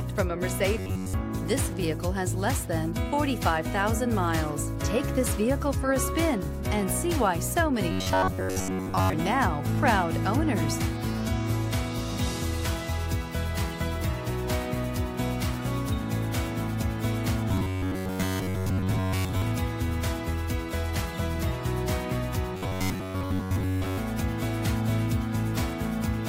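A rigid, metallic buzz near 94 Hz is heard from 0.77 to 1.14 s, 7.92 to 9.13 s, 17.49 to 19.42 s and 22.55 to 23.98 s. This robotic sound likely comes from repeated short buffers: with audio arriving late, a roughly 11 ms slice is replayed over and over, replacing most of the real signal.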